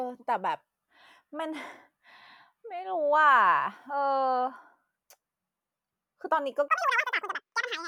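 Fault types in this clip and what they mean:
Audio read two samples at a time (double speed): The reader treats each pair of samples as a single frame, as if the stream had two channels or samples twice as wide, so it gets through the data twice as fast. From 6.68 s to 7.87 s, at the end of the clip, the speech runs at 2x speed and sits a full octave (12 semitones) higher.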